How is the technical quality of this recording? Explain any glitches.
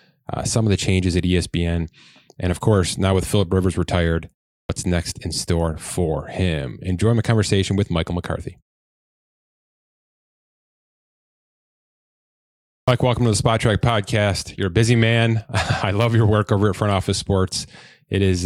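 The recording has a clipped start after a pause in two places. At 4.65 s, after a 0.39 s gap, about 43 ms of onset vanishes; at 12.84 s, after 4.31 s of silence, about 37 ms goes. The output device sleeps through silence and wakes too late, so the sound starts abruptly. Muted pauses, by contrast, simply quieten the gaps without cutting any speech.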